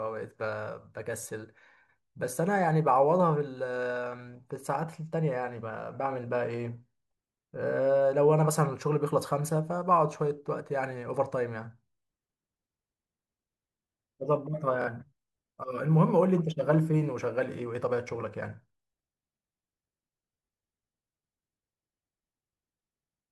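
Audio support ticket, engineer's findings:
Short buzzy repeats in the speech: a tiny slice plays twice, then the sound jumps ahead. 1.23–1.26 s: single stutter, about 23 ms of audio missing. 14.82–14.88 s: longer double repeat, about 46 ms missing, fits two consecutive lost packets. 20.46–20.48 s: single stutter, about 23 ms missing. Component: Bluetooth link. Mechanism: Bluetooth stutter. Packets arrive late or are dropped, the receiver replays its last buffer, and playback resumes further on.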